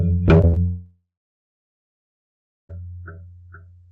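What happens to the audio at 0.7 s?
At 0.7 s the sound has just entered a long network dropout, likely, running from 0.66 to 2.71 s. The receiver stretches the last audio into a fading buzz, then about 1.6 s of silence. Unlike a brief packet-loss glitch, the lost stretch never returns.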